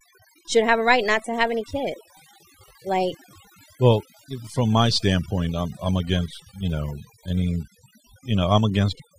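A speech recording with overdone noise removal running through the whole clip. The background between phrases drops, yet it isn't clean: twinkling specks flicker in and out. That happens because the noise reducer was set so hard that individual frequency bands sitting near its noise estimate are pulled right down or switched off, taking quieter parts of the voice with them. Unlike a noise gate, which shuts the whole signal at once, this works band by band, so the residue is scattered tonal sparkle rather than clean on-off cuts.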